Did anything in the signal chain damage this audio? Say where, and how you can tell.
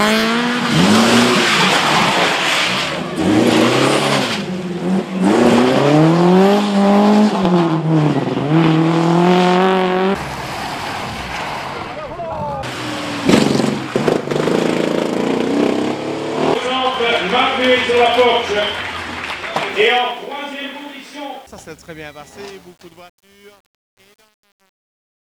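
Yes, there is truncation distortion on a fade at the sample-format or gain stage. From 19.69 s to 25.32 s the fade-out turns gritty, and from 20.63 s it is at its worst. The undithered fade suggests about 9-bit resolution, collapsing the low-level waveform into coarse steps.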